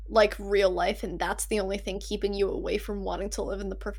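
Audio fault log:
Throughout, mains hum: a steady low tone at 50 Hz sits under the speech, loud at roughly 10 dB below it, never changing in pitch or level whether anyone is talking or not. Power-line current leaking into the signal path, through a ground loop or a nearby transformer, produces it. Its fixed pitch and few low harmonics set it apart from rumble, which is broadband and wanders, and from buzz, which is rich in upper harmonics.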